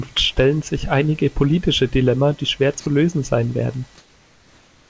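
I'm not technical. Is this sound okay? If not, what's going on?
No, there are two problems. The first is sound dropped by the voice detector. From 2.80 to 2.86 s, just after "die schwer" and before "lösen sein werden", a brief slice of speech vanishes and plain hiss fills the gap. The call software likely mistook that quiet moment of speech for background and briefly stopped sending it.

The second is comfort noise in place of the background. From 3.98 s, after "lösen sein werden", to the end, the real room sound is swapped for a smooth, even, slightly quieter hiss. This is likely because the sender paused transmission during silence and the receiver generated filler noise.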